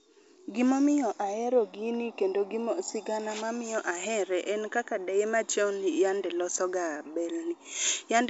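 No technical faults occur at any point in this speech clip, which comes through the G.722 wideband telephone path at 64 kbit/s with its band edge near 7.7 kHz.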